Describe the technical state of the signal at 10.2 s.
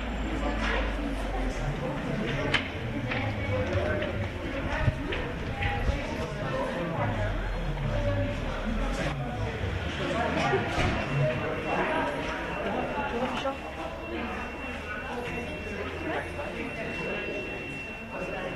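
At 10.2 s the signal is intact, with no audible technical fault at that point in the sound.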